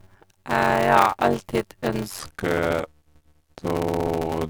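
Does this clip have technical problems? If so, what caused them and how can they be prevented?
Yes. Throughout there's a steady buzz at about 93.8 Hz. That's a block size mismatch (padded): each block comes up short of what the next stage reads, which fits 512-sample reads, and the gap is filled with silence. So speech runs at 0.625× speed but keeps its normal timbre. Matching block sizes between stages prevents it.

From 2.19 s to the end, there's a section at the wrong speed. It plays at 0.807× and drops about four semitones, so the speech turns deep and slow. The likely cause is an editor or player fitting that part to the wrong clock. Checking clock and sample-rate settings at every edit point avoids it.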